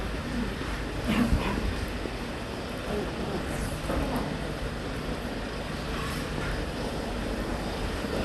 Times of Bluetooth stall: none

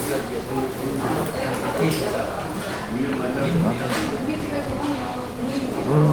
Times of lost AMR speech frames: none

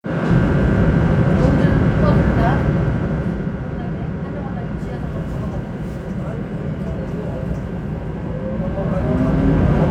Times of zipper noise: 2.51-3.62, 8.45-9.75

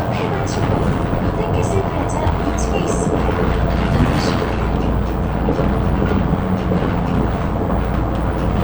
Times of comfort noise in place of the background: none

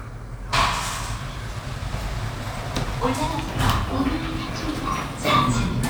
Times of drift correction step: 3.27-5.50

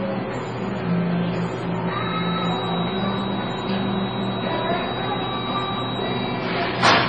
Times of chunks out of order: none

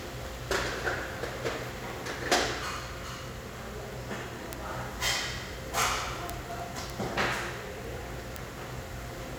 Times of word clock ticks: 0.14-9.35

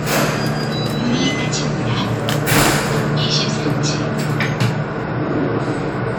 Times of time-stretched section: none

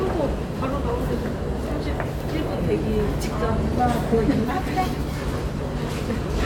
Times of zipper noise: none

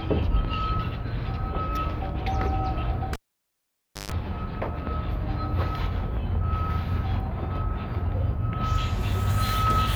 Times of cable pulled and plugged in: 3.13-4.12

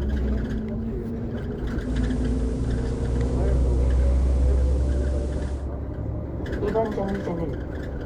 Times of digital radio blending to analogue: 1.75-5.70

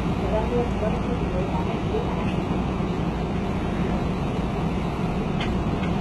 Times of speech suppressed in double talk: none

